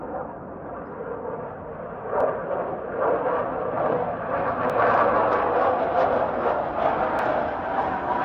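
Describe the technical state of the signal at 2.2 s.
Audio missing between chunks at 2.21 s: a tiny skip where a few milliseconds of sound vanish and the material on either side butts straight together with no gap of silence. The cause is likely a recorder or processor handling the signal in blocks of about 2.5 s and dropping a sliver while it closes one block and opens the next, so the join lands abruptly rather than continuing smoothly.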